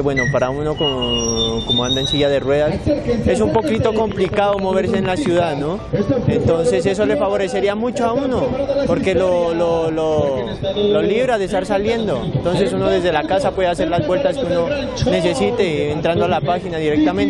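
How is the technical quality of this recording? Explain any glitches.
The recording has one glitch: a train of clicks from 3.55 to 5.44 s. The likely cause is an outside source repeatedly injecting a short pulse into the signal path, such as electrical interference from nearby equipment or a faulty connection or power supply. Over that stretch of nearly two seconds there are about twenty clicks of similar shape, averaging roughly nine per second but unevenly spaced. They peak about 10 dB above the program material and sound like sharp, uneven ticking laid over the audio.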